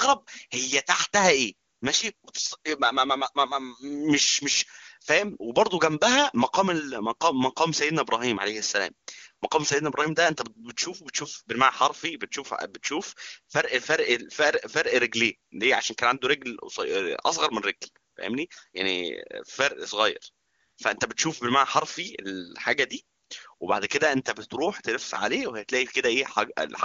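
No technical faults can be heard in this speech.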